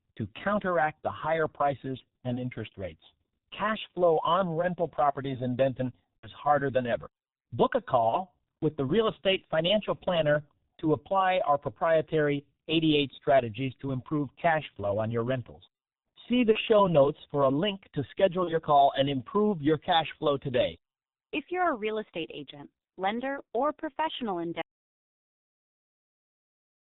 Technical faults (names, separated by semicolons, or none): G.723.1 codec; VoIP packet loss concealed by the speech codec; audio dropout to silence